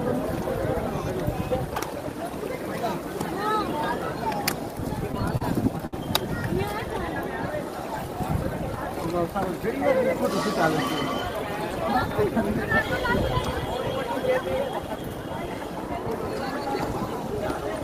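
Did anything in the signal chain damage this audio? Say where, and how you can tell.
Yes, at the network and jitter-buffer stage. From 5.03 to 5.94 s there are repeated stalls (stutter): the buffer ran dry seven times, and the receiver continued the last sound to fill about 151 ms, with the longest gap 63 ms. Nothing is actually missing, but that stretch drags and hiccups. On a waveform you'd see near-identical repeated cycles. A spectrogram shows short frozen, smeared bands instead of normal evolution.

From 16.43 to 17.02 s the jitter buffer speed-up is audible. The receiver had built up excess delay and trimmed it by cutting out pitch-period-sized pieces, removing roughly 40 ms in total, so that section plays at about 106% speed with unchanged pitch and sounds slightly hurried. On a spectrogram the harmonics stay at the same frequencies but features arrive compressed in time, and the waveform shows small splice points where cycles were dropped.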